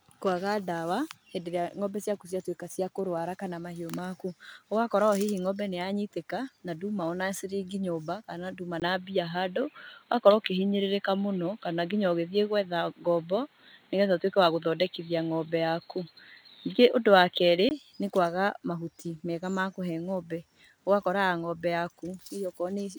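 Speech recording that turns dull from 8.80 to 17.71 s, with nothing above 4.3 kHz, a brief gap at the change, a modest level shift and faint new noise, likely an input switched to a poorer device.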